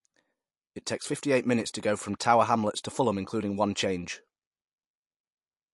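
Throughout the speech, the audio shows plainly audible damage of the kind produced by MP3 compression, likely from an encode at a low bitrate, which fits roughly 48 kbps. Nothing is present above 11.3 kHz, where the encoder has cut the treble to save bits, leaving the sound dull at the top. Weak frequency components drop in and out between frames, giving the speech a watery, swirling texture and softening its attacks.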